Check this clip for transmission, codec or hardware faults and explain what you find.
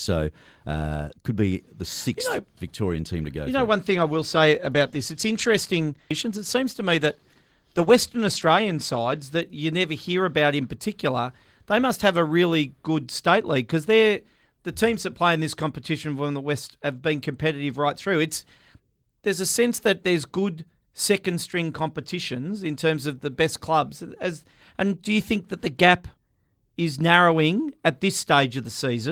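One fault is present: a call bitrate drop. From 3.88 s, just after "know one", until 9.31 s, ahead of "that you never hear", the speech sounds rougher and grainier. The bandwidth estimate fell, so the encoder coded with fewer bits, consistent with a drop from about 32 to 16 kbps.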